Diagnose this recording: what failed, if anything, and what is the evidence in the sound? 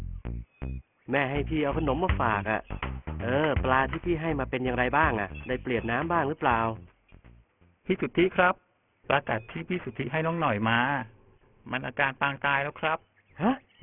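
Aliasing throughout, from a sample-rate conversion with no anti-alias filter: highs fold back around 3 kHz as gritty, unrelated tones sitting roughly 15 dB down, which fits a drop to a 6 kHz rate.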